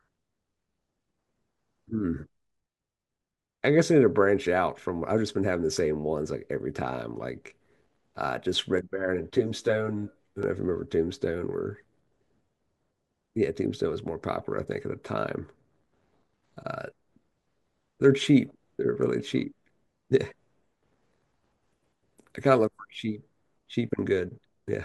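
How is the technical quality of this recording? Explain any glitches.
One glitch stands out in this speech recording. From 8.78 to 10.43 s there is channel delay (comb filtering). One channel arrives about 10 ms late and is summed with the other. Shared content cancels at regularly spaced frequencies, starting near 50 Hz, so the speech turns hollow and phasey.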